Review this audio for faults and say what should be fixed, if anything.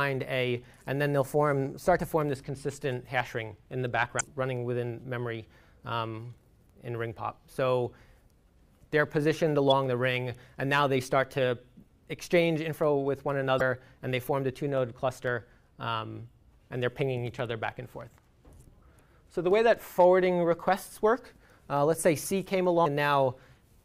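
Damaged data in a compressed stream shows up as four short bursts, at 4.17–4.21 s, 9.70–9.72 s, 13.57–13.62 s and 22.85 s. At each, corrupted bytes make the decoder misread the frame and lose sync until it finds the next valid frame header, leaving a brief chirp or blip in the sound. On a spectrogram each burst appears as a narrow vertical smear of broadband energy. In the waveform the fault shows as an abrupt discontinuity. Prevent it by transferring and storing the file with checksums or error-checked framing, and re-fetching any segment that fails verification.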